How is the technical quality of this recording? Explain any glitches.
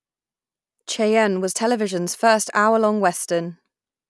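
No glitches or technical faults can be heard here.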